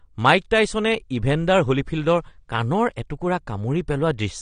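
From start to end the speech sounds dull and smeared, with a warble and fizz on sustained sounds and sibilants, and nothing is present above about 9.7 kHz. These are the marks of AAC compression, likely AAC-LC working at a low bitrate, which fits something near 32 kbps. Short of bits, the encoder lowers its cut-off, quantises the remaining frequency lines coarsely, and leaves or fills gaps in the spectrum, so the damage is plainly audible.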